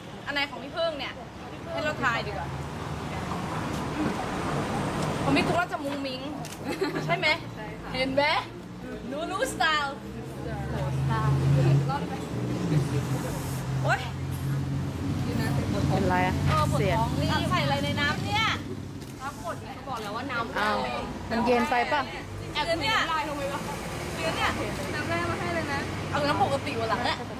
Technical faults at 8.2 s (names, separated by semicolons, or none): none